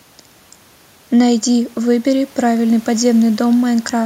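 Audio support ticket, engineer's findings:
No faults found. Room noise about 32 dB below speech.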